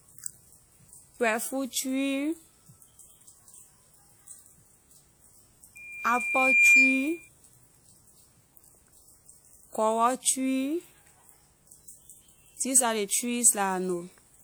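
Loudspeaker feedback squeal runs from 5.75 to 7.29 s in this speech recording. A single tone at 2.4 kHz swells over roughly a second until it stands about 10 dB above the speech. The microphone is picking up the loudspeaker it feeds, and at 2.4 kHz the loop's gain exceeds one. Each pass round the loop reinforces that frequency, so it builds up, and the squeal lasts until 7.29 s.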